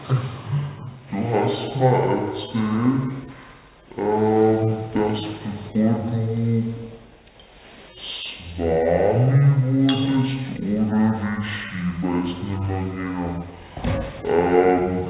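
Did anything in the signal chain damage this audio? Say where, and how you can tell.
Yes, and it's at playback: a wrong sample rate across the whole clip. Everything runs at half speed and sits a full octave low, about 12 semitones down, with speed and pitch dropping together rather than separately. That locked 2:1 ratio fits audio captured at 16 kHz being clocked out at 8 kHz with no resampling in between, so each sample just lasts twice as long as it should.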